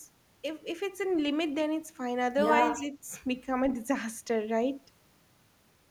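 At 2.79 to 2.9 s the speech dips by roughly 5 dB, likely speech suppressed in double talk, as the echo canceller briefly turned down the talker along with the loudspeaker echo.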